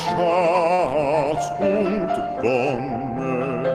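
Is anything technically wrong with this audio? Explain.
Yes. From 0.73 to 0.81 s there is a short stall from a late packet. The jitter buffer ran dry, so the receiver stretched the last sound by about 50 ms until the packet came, then resumed without losing anything. The sound is audibly held, with a slight buzz or dip, and what follows is delayed by 50 ms.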